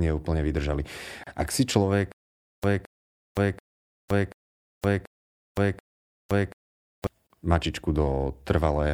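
Right after "neúplne vydržali", at 1.24 to 1.27 s, the speech drops out for about 32 ms with smeared edges, then resumes where it left off. This is a gap at a join of encoded pieces: separately encoded segments were butted together with their encoder delay and end padding left in. From 2.12 to 7.07 s, a 217 ms fragment repeats six times, each followed by about 517 ms of dead silence, on an even 734 ms cycle. This stutter with silent gaps likely comes from a stalling stream replaying its last buffer before running empty, losing the audio in between. At 7.27 to 7.30 s, a second gap of about 34 ms appears, 6 s after the first, marking the next join between encoded pieces.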